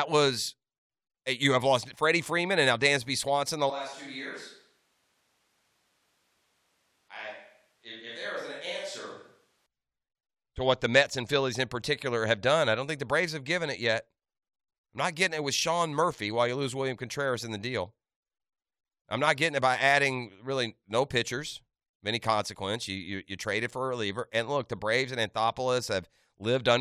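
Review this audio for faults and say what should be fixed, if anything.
From 3.70 to 9.66 s, likely a switch to a distant microphone: speech turns suddenly roomy and hollow, about 10 dB quieter, with more room noise. Monitor the close microphone's feed during recording and keep a backup recorder on it, so a dropout never forces the distant track into the edit.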